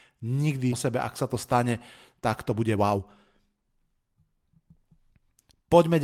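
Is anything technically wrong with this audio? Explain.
Yes. The speech has two faults.

At 0.71 to 0.73 s, just before "sebe ak sa", there is a skip ahead. About a second of audio was dropped while later audio was already queued. Playback jumps straight to the later audio with no gap, and the join is abrupt.

From 2.5 to 5.68 s, right after "tak to", there is a jitter buffer speed-up. The buffer held too much audio. The receiver trimmed tiny pitch-period pieces again and again, removing around 0.4 s in total. The speech runs about 12% fast at unchanged pitch and sounds hurried.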